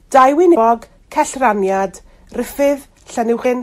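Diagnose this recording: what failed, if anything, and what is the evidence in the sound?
Hard clipping occurs from 0.16 to 0.25 s, where the speech peaks are driven about 4 dB past the converter or gain stage's ceiling. The waveform tops are sliced flat, and the added high harmonics sound like a short, gritty crackle on the loudest part.

Damaged data in a compressed stream shows up twice, at 0.51 to 0.56 s and at 3.41 to 3.46 s. Each is a brief glitch where corrupted frames were misdecoded while the decoder lost sync and hunted for the next valid frame header.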